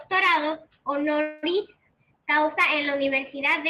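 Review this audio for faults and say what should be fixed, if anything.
From 1.21 to 1.45 s the speech stalls in a call audio freeze. The last sound is held as a fading buzz or hiss for about 213 ms, likely because packets were delayed and the jitter buffer ran empty. Unlike packet loss, nothing is skipped: the speech resumes exactly where it stopped, just later. A deeper adaptive jitter buffer would absorb such delays.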